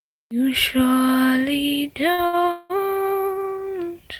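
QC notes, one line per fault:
2.13–2.20 s and 2.26–2.35 s, short stall from a late packet: a sound is held briefly with a faint buzz or dip, about 48 ms then 69 ms, as the jitter buffer ran empty before resuming.
2.51–2.72 s, call audio freeze: the last sound carries on as a fading buzz or hiss for about 185 ms without falling silent, then resumes, likely from packets held up and an emptied jitter buffer.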